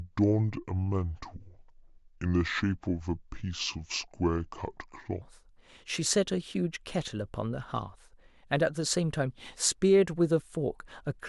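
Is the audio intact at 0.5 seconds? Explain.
No. At 0.5 seconds the speech is affected by a wrong sample rate, which runs from the start to 5.22 s. The samples are played back slower than they were captured, with no conversion. Speed and pitch drop together. The voice runs at about two-thirds speed and sits about 7 semitones low, so it sounds deep and dragging. That ratio fits audio recorded at 48 kHz but played at 32 kHz.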